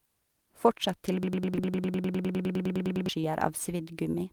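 From 1.23 to 3.09 s there is a broken-record loop. A fragment of about 0.1 s (102 ms) repeats exactly, back to back, 18 times, and the speech due in that span never plays. The likely cause is a stalled player or stream resending its last held buffer. On a spectrogram it appears as one identical block tiled at a steady 102 ms spacing, and the waveform repeats the same shape each time.

At 1.55–1.59 s and again at 3.21–3.25 s there is short concealed packet loss. About 20 ms of audio failed to arrive, and the decoder stretched the preceding sound to cover the hole, heard as a brief smear or wobble. On a spectrogram the harmonics briefly freeze or blur before the real signal resumes.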